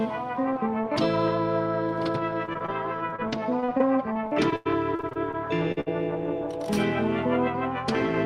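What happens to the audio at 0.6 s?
Nothing goes wrong at 0.6 s; the music plays through that moment intact, with no dropout, click or other fault.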